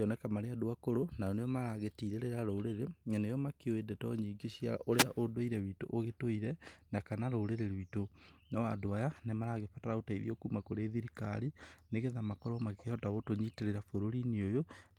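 At 4.97 s, just after "makĩũĩ ndeto nyingĩ cia", a short burst of static cuts across the speech. It lasts about 70 ms and ends by 5.04 s, before "ũndũire witũ ũgĩtũire na". This is a wireless microphone noise hit. The radio link from an analogue FM microphone briefly faded as reflected signals cancelled the direct one. The receiver's own hiss rose up through the weak signal. It is heard as a quick swish of noise over the voice.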